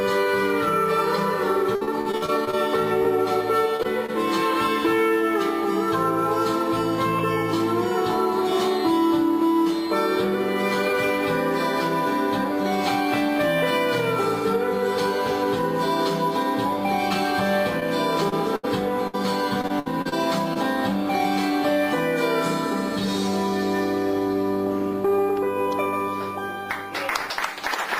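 The audio has repeated packet loss (robotic sound) from 1.75 to 3.06 s (9 gaps, longest 56 ms) and from 17.80 to 20.57 s (10 gaps, longest 74 ms). In each stretch the receiver keeps extending the last sound to fill the holes, which makes it choppy. Short concealed packet loss at 3.76–3.81, 3.83–3.86 and 4.06–4.10 s drops about 20 ms each time, and the patching leaves brief smears or wobbles.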